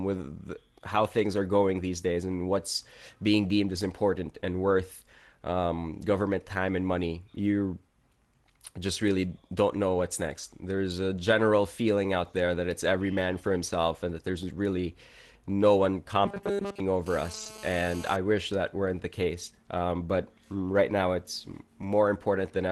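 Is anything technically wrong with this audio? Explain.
Yes, three faults cluster in the last third of this speech clip.

From 16.26 to 16.80 s, right after "there's really no one", there is robotic sound from repeated short buffers. It is likely caused by audio arriving too slowly, so the playback repeats its last few milliseconds in place of most of the real audio. The repeat rate imposes a fixed 200 Hz buzz, which fits a 5 ms buffer, and the voice turns metallic. A spectrogram shows flat, evenly spaced harmonics at multiples of 200 Hz, and the waveform shows a short pattern copied over and over.

From 17.06 to 18.16 s, ending just before "wish that weren't the", there is GSM phone buzz. A nearby 2G phone on an active call transmits in bursts about 217 times a second, and the audio circuitry rectifies those pulses into sound. It is a harsh, raspy 217 Hz buzz about 17 dB below the speech, steady for its whole span and unrelated to the words. 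On a spectrogram it forms a dense comb of horizontal lines at 217 Hz and its harmonics, and the waveform carries a regular pulse train.

From 17.33 to 17.47 s, inside the buzz, is a lost packet rebuilt from error correction. The loss pattern points to four packets. Each was replaced by the low-bitrate backup copy carried in the following packet, so the 80 ms of rebuilt audio has no gap but sounds rougher and noisier, with no dropout in the waveform.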